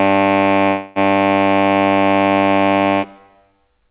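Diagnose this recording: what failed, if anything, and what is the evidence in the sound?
A call audio freeze interrupts the music from 0.68 to 0.99 s. The last sound smears into a fading buzz, then the music resumes where it stopped, now 277 ms late, with nothing lost. The likely cause is delayed network packets draining the jitter buffer. The spectrogram shows fading horizontal streaks capped near 4 kHz, like the surrounding call-coded audio. The waveform has no silent gap.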